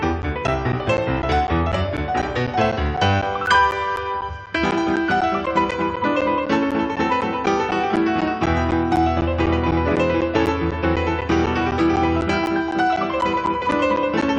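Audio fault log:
0.22–14.22 s: periodic USB or driver dropouts. Roughly every 0.25 s, around 10 ms of audio drops out and is replaced by silence, about fifty times in all. Something stalls the audio path at a fixed interval, so the gaps sound as evenly spaced ticks against the signal.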